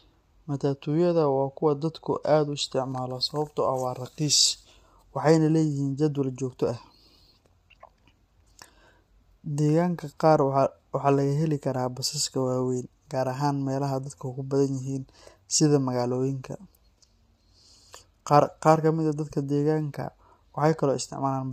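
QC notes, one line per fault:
Throughout, low-delay AAC compression. The speech has a plainly audible rough, grainy texture. The cause is likely a low-delay codec of the AAC-ELD kind used for video calls. Its short frames, around 10 ms, cannot separate the pitch harmonics cleanly. Coding noise fills the gaps between them. The damage level fits a bitrate of about 32 kbps. At that rate, short frames leave too few bits to keep the voice smooth.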